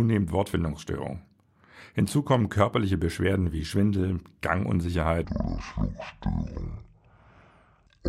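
Section at the wrong speed, 5.24 s to the end: sound plays at 0.54 times speed, roughly ten semitones deeper and slower, likely from a mismatched clock.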